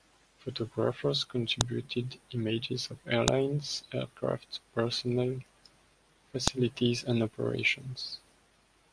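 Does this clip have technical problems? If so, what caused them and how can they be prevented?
Yes. Sharp, loud clicks at 1.61, 3.28 (just after "images of") and 6.48 seconds are a file header played as audio. Each joined WAV piece kept its header, and those few dozen bytes were read as samples, so each produces a snap unrelated to the speech. On a waveform each is a near-vertical spike lasting a couple of milliseconds; on a spectrogram, a thin broadband vertical line. Strip each piece's header before concatenating or streaming the audio data.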